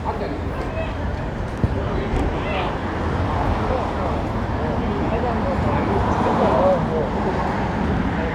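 At 0.55 s the whole sound drops about a semitone flat, 116 cents down and running 6.5% slow, then snaps back to normal at 2.34 s. The same thing happens again from 6.92 s through to the end. Speed and pitch sag together and then jump back, which is the signature of a drift correction step, likely clock-matching software briefly slowing playback in one jump to rebalance its buffer.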